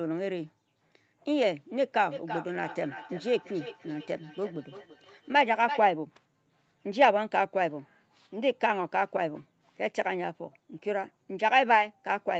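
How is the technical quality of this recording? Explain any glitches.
One real glitch here, a stretch of feedback echo between two devices, from 2.11 to 5.94 s. The speech keeps coming back at a steady interval of roughly a third of a second, each pass thinner and more ringing, with the loudest repeat sitting about 12 dB under the direct speech. That's two devices on the same call in one room: one plays the other's audio, its mic picks it up again, and neither echo canceller removes sound from the other device. The top end stopping at 8 kHz is just the call codec's bandwidth.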